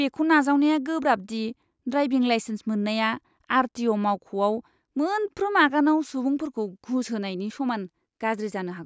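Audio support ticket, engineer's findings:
No faults found on listening.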